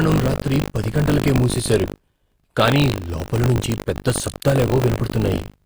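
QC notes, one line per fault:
throughout – HE-AAC compression: the treble is bright but synthetic, with gritty, lispy sibilants. The upper band is likely rebuilt from copied lower bands rather than coded directly, which fits a low bitrate around 24 kbps. The harmonics therefore don't line up across the crossover.
throughout – buffer tearing: a steady 50 Hz robotic rattle rides on the speech and stops in the gaps. Writer and reader pointers cross every period, so a small slice of each buffer holds audio from roughly 70 ms earlier, hard-spliced on both sides. This fits a buffer period of about 20 ms.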